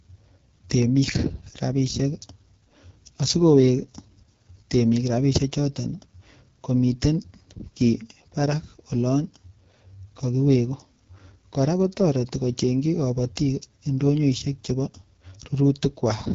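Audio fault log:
Throughout: AMR wideband (HD Voice) codec. The speech is rough and raspy, with plainly audible damage that fits one of the codec's two lowest rates, likely 8.85 kbit/s. A spectrogram shows a hard ceiling near 7.7 kHz and smeared, noisy texture in the top band.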